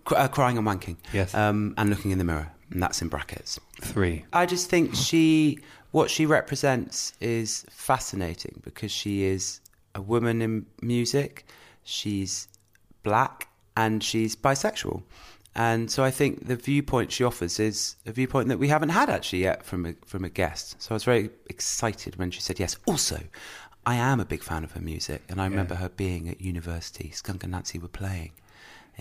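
Right near the end of the speech, at about 26.74 s, just after "remember her being at", there's a single sharp click. It's most likely dropped samples: a handful of samples, roughly a tenth of a millisecond's worth, went missing, so the waveform jumps straight from one value to a later one. That's far too brief to take anything audible out of the speech. You just hear the tick, and it shows up as a thin vertical line across the spectrum.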